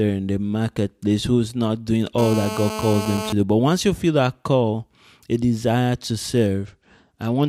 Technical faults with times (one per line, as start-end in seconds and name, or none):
2.18-3.33 GSM phone buzz
6.66-7.49 Bluetooth SBC bit pool drop